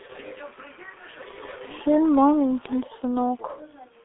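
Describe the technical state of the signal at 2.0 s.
At 2.0 s the sound carries G.723.1 codec damage, present across the whole clip. Nothing passes above 3.8 kHz, and the line band runs about 250 Hz to 3.6 kHz. Heavy coding, which fits a rate near 6 kbit/s, leaves the speech muffled and hoarse, with blurred consonants.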